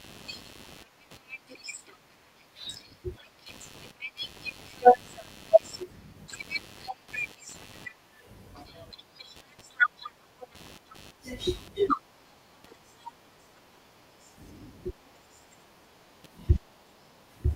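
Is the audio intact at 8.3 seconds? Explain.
No. At 8.3 seconds, as across the whole clip, there is computer activity noise. Shifting load on the computer's processor, graphics card or mouse is disturbing the ground that the audio circuit shares with it, so those current swings leak into the signal. The result is a buzzy, chirping pulse at around 100 per second, sitting roughly 20 dB below the speech, and it follows the machine's workload rather than anything in the speech.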